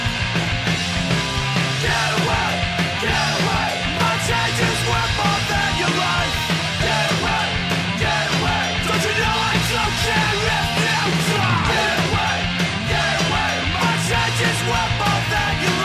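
No technical fault can be heard anywhere in this audio. Nothing in the sound points to a problem in how it was captured or carried.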